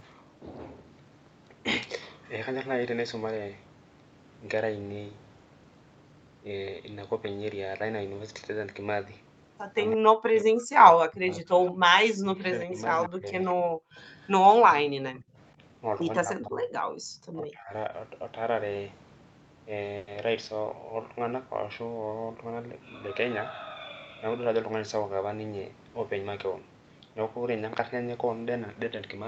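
Speech suppressed in double talk, 9.96 to 13.91 s: the speech dips by up to about 40 dB, roughly two seconds in all. This is likely because the echo canceller turned down the talker along with the far side's echo.

Echo leak at 11.7 s, and again from 13.03 to 14.3 s: a delayed copy trails 164 ms behind. It is faint at first, about 25 dB down, then stronger, about 15 dB below the speech. This is likely loudspeaker echo the canceller failed to remove.

More double-talk suppression follows at 14.54 to 15.59 s (up to about 40 dB), then at 16.2 to 16.69 s and 17.33 to 17.91 s (about 25 dB).

Background gated by the echo canceller, 16.97 to 17.05 s: the room sound drops by about 36 dB for about 70 ms while the canceller clamps the microphone, then returns.

Call audio freeze, 19.97 to 20.09 s: the last sound is stretched into a 100 ms fading buzz, likely because held-up packets emptied the jitter buffer. 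The audio then resumes where it stopped, with nothing lost.

Jitter buffer speed-up, 22.01 to 22.75 s: short pitch-period pieces totalling about 100 ms are removed, so the speech runs at 113% speed. It sounds hurried but keeps the same pitch.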